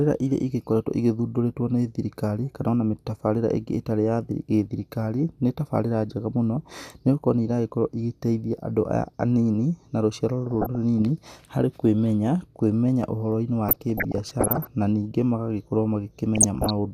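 DAB burbling at 10.51–11.02, 13.69–14.67 and 16.35–16.70 s: bit errors corrupt sub-band levels, giving squelchy bubbling, seen as flickering spectrogram blocks, heaviest in the middle burst.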